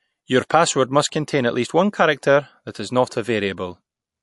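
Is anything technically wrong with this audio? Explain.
Yes. Throughout the speech, the audio has been squeezed through MP3 compression at a low bitrate, likely, with damage that fits something around 48 kbps. With that few bits, the encoder zeroes quieter frequency lines, which flicker on and off from frame to frame. The result is a watery, swirling texture, with metallic chirps on s sounds and smeared consonant attacks.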